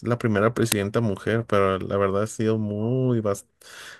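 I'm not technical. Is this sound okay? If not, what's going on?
No. At about 0.72 s there is an uninitialised buffer: the playback system sent out a chunk of memory before any sound had been written into it, so whatever leftover data was sitting there got played as if it were audio. In this speech clip that chunk lasts about 5 ms, and you hear it as a sudden, loud crack, a sharp click-like crackle that cuts in and is gone almost instantly.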